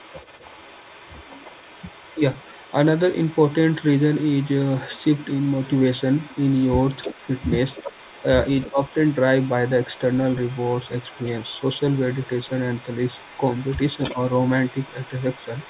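From the start of the speech there is an echo leak. A faint copy of the talker returns about 320 ms late, roughly 25 dB below the direct sound. It runs from 0 to 2.75 s, from 2.95 to 7.52 s and from 8.44 s to the end. Between 7.7 and 8.27 s it is stronger, about 20 dB down. The likely cause is a loudspeaker at the far end whose echo canceller let part of its microphone pickup return. It sounds like a delayed copy behind the speech.

Speech is also suppressed in double talk. At 2.15 to 2.21 s and 8.71 to 8.79 s the voice dips by about 10 dB for roughly 70 ms. At 14.12 to 14.17 s there is a shallower dip of about 5 dB. Each one lands while the echo overlaps the talker. The canceller likely could not separate the two, so it turned both down. These are brief gaps in level. The audio has no content above 4 kHz, which fits a narrowband call codec.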